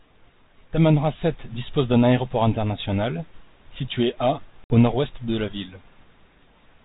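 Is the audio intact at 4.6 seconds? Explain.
No. Packet loss on an ADPCM call hits at 4.64 to 4.75 s. About 60 ms of a few packets vanishes into a hard-edged silent gap. The G.726 decoder's adaptive predictor and step size then lose track of the sender, so the sound resumes slightly distorted until they resynchronise.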